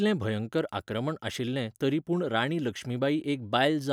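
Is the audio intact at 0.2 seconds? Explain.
Yes, the audio is intact at 0.2 seconds, with no fault audible at that moment.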